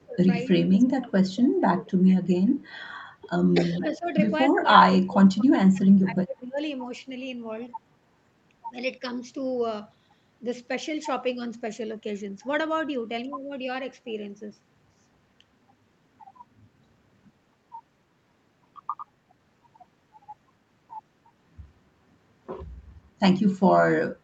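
Speech suppressed in double talk, likely from an echo canceller that could not separate the near talker from far-end echo while both sides spoke, pulls this speech recording down at 0 to 0.17 s, 0.67 to 2.35 s, 3.59 to 4.08 s and 4.51 to 6.58 s, with dips of roughly 15 to 30 dB, deepest in the final stretch.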